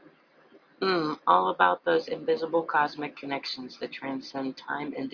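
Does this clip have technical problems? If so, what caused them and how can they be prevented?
No, this clip has no technical problems, so there is nothing to trace or prevent.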